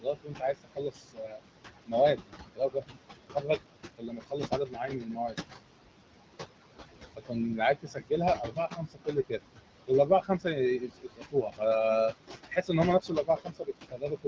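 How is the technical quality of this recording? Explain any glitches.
The quality is held back by heavy noise reduction, which both colours the background and eats into the speech itself.

Noise suppressor artifacts, present throughout the clip: the suppressor turns down, frame by frame, every frequency band it judges to be steady noise, by about 21 dB. The room noise, about 9 dB below the speech, therefore sinks in the gaps and swells back under the talking.

Speech cut by the noise suppressor, at 0.01–1.41, 1.86–3.63, 3.96–5.38, 7.15–9.47, 9.87–11.61 and 12.49–14.26 s: in each stretch the suppressor mistakes quieter parts of the speech for noise and pulls them down by about 21 to 22 dB, for roughly a second or somewhat less in total. Soft consonants and word endings sound swallowed or faint.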